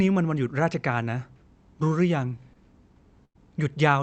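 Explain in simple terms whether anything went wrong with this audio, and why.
Two stretches of this speech were lost on their way across the call. At about 2.53 to 2.57 s there is a short concealed packet loss: a small piece of audio, about 20 ms worth, arrived too late for the receiver to use. The receiver covered the hole by stretching the sound that came just before it for roughly 15 ms and then blending back into the real audio. You hear this as a tiny smear or wobble, and a very short sound at that spot may go missing.

At about 3.25 to 3.37 s there is a burst of packet loss, a bigger gap in which about 100 ms of audio never arrived in time. The receiver kept the last sound going for nearly all of that gap and let it fade, so it comes out as a brief held buzz or fading hiss rather than speech. The speech then picks up a little further along, and whatever fell inside the gap is simply gone. 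Both gaps happened in the Opus call path, whose sound reaches up to about 8 kHz.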